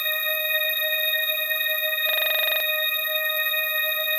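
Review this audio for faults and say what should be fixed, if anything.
System hang loop, 2.09 to 2.60 s: the host froze while playback kept cycling one 43 ms ring-buffer segment, probably a 2048-sample buffer, repeating 12 times at 23.4 Hz and losing about half a second. Prevent it by having the driver mute or zero the buffer when the host stops refilling it.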